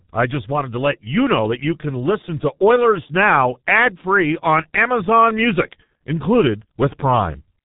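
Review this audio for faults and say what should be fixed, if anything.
The whole clip has been through the G.723.1 codec, and it's heavy going. Nothing gets through above 3.8 kHz, so the speech is muffled, with a hoarse, smeared texture and soft consonants, which fits a rate around 6 kbit/s. Route the call over a wideband codec to avoid this.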